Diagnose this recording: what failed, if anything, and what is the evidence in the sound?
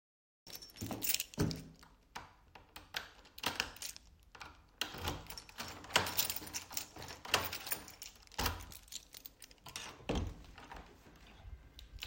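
A cut-off start, where capture or storage began late: the file opens with about 0.47 s of digital silence, then the sound appears abruptly at 0.47 s, already in progress, with no natural attack or fade-in. The recorder or stream joined partway through the event, so its beginning was never written. On a waveform this is a flat silent line that jumps straight to the material; a spectrogram shows an empty band, then energy across frequencies switching on along a sharp vertical edge.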